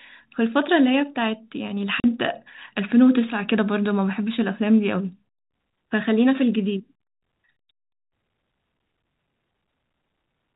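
At 2.0 s the speech drops out for 40 ms: packet loss filled with silence. Missing packets were replaced by dead digital silence, which fits four 10 ms packets. Unlike concealment, which smears or repeats sound, this gap is truly empty, with hard edges at both ends, over the narrow G.711 telephone band.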